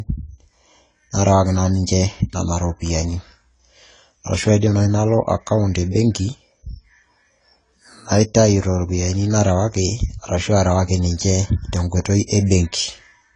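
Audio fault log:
throughout, AAC compression: the speech sounds dull and smeared, with plainly audible coding damage. The likely cause is AAC-LC at a low bitrate near 24 kbps, which discards fine spectral detail. A spectrogram shows a hard, flat ceiling with nothing above 10 kHz.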